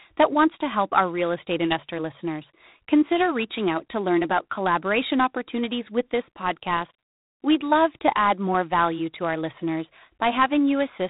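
The speech has passed through G.726 ADPCM coding throughout, at a coarseness that fits the 24 kbit/s mode. Each sample carries too few bits of prediction error, so a harsh, rasping hiss rides on the speech and rises and falls with its level. Nothing above 3.8 kHz survives.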